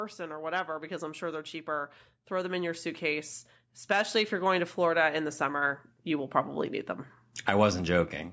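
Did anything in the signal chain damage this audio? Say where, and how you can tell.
Yes. Between 3.88 and 6.62 s, just before "need them", the call processing's automatic gain is rising: the speech and the background noise floor swell together by about 5 dB. The AGC judged the input too quiet and raised its gain gradually, not in one step. On a waveform the envelope, including the pauses, ramps up over those few seconds. On a spectrogram every band, noise included, brightens uniformly across that span.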